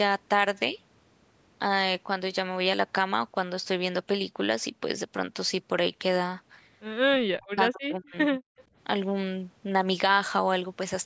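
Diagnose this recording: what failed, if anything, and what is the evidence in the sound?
Call processing stage: between 7.05 and 8.42 s the speech dips and breaks up in pieces, about a second in total, with the deepest drop around 40 dB. This is likely speech suppressed in double talk, where the echo canceller ducked the near talker while the far side spoke. A network dropout would instead leave abrupt silent gaps.

Call processing stage: from 8.57 to 8.62 s a faint scrap of the voice, about 30 dB below the speech, repeats 182 ms after the original. The likely cause is an echo leak, with loudspeaker pickup not fully cancelled and sent back. Room reverberation would decay smoothly rather than return as one discrete delayed copy.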